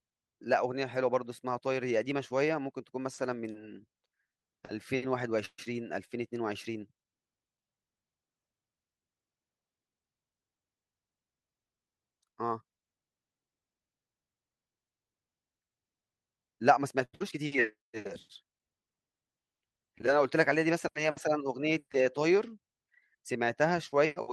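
At 5.45 s the audio hits a call audio freeze that lasts until 5.59 s. The last sound carries on as a fading buzz or hiss and then drops to about 40 ms of silence before things pick up exactly where they left off. That's roughly 128 ms of filler with nothing actually lost. The likely cause is packets getting held up in transit, so the jitter buffer ran dry and the receiver had to improvise until they showed up.

Then around 17 s there's a little cluster. First, from 17.04 to 17.14 s, you get a short stall from a late packet. One packet wasn't there on time, so the receiver stretched the current sound for about 89 ms until it arrived, then resumed from the same spot. You hear it as one sound hanging on a touch too long with a faint buzzy dip, and the whole call sits about 89 ms later from then on.

Right after, at 17.18 to 17.21 s, comes a short concealed packet loss. About 60 ms of audio never made it to the decoder, and the receiver patched it with only around 18 ms of synthesized continuation before blending back in. 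So it's a quick smear or wobble, and it claws back roughly 40 ms of that earlier delay.

Finally, from 17.66 to 18.02 s, there's a jitter buffer slow-down. The buffer was topping itself back up by repeating single pitch periods or bits of pauses over and over, which adds about 54 ms. Playback runs at 87% speed with unchanged pitch, so that stretch sounds drawn out, maybe with a slight warble.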